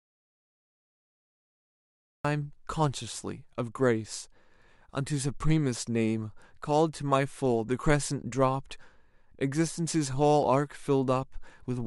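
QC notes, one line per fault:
0.00–2.25 s, audio dropout to silence: the clip opens already inside a stretch of dead digital silence, with no room tone or hiss at all, and the speech only arrives when the signal returns at about 2.25 s, mid-flow. That flat silence points to the input being lost upstream, likely a disconnected device, a failed link or an accidental mute, while the recorder kept writing empty samples. Whatever was spoken before the return cannot be recovered.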